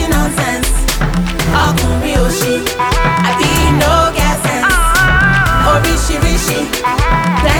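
Nothing stood out as a technical fault on listening.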